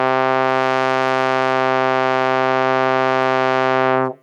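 Gain pumping runs through the whole piece of music: the level ducks by around 10 dB under every loud sound, likely from a fast limiter grabbing an overdriven input. The waveform looks flattened, with its quiet floor rising and falling.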